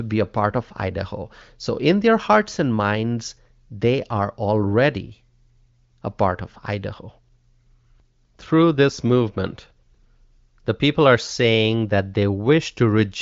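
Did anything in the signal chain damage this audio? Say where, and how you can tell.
No, nothing in the chain damaged this audio.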